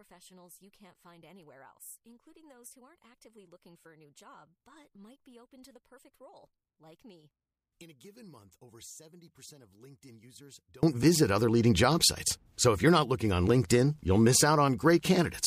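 Speech, with one channel inverted from the start to 10.83 s. Summed to mono, the centred voice nearly cancels and drops by about 29 dB. Only a faint residue of the channel difference remains. The likely cause is reversed polarity on one stereo channel.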